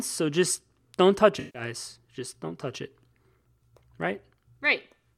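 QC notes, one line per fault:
1.39–1.62 s, AAC frame loss with concealment: about 150 ms of speech is replaced by decoder fill rebuilt from the last good spectrum, which fits roughly seven consecutive lost frames. Repeating that spectrum with randomised signs gives a smeared, noisy, phasey patch.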